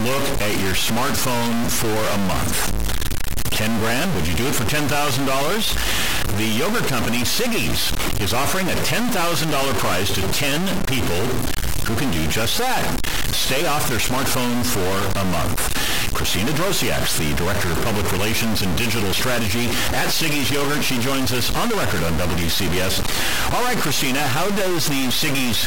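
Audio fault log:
throughout: stuck bit. Harsh, buzzy distortion rides on the speech, and pauses fill with steady noise instead of silence. A converter bit likely held at one value, its step about -15 dBFS, pushes roughly half the samples off by a fixed amount.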